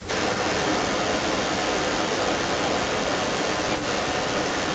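It's a short speech clip with an echo leak running the whole way through, from 0 to about 4.7 s. A delayed copy of the talker trails the original by around 0.36 s, and it's strong, roughly 10 dB above the direct speech. The likely cause is a far end on speakerphone whose echo canceller didn't catch what its mic picked up, so the call sent it straight back. The top end stops around 8 kHz, as you'd expect from a wideband call path.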